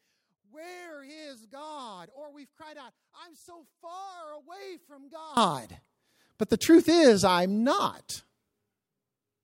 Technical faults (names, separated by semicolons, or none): one channel inverted